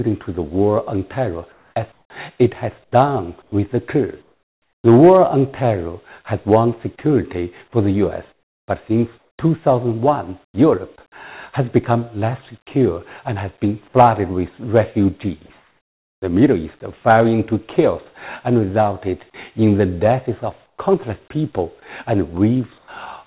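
In the pauses at 1.52–2.10, 2.84–3.52, 4.22–4.84, 8.32–9.38, 10.46–10.54, 15.58–16.22, 20.66–20.78 and 22.78–22.88 s, the background turns flat and featureless, and in the pauses at 4.22, 10.46, 15.58, 20.66 and 22.78 s it is about 2 to 5 dB quieter. This is comfort noise in place of the background, likely from discontinuous transmission on a call path limited to 4 kHz.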